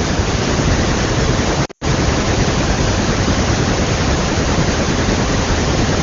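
From 1.65 to 1.84 s, lost AMR speech frames break up the speech. Radio errors corrupted several frames. The wideband decoder stretched the last good sound with falling gain. The longest gap, about 100 ms, smears and fades out. The speech then returns briefly rough.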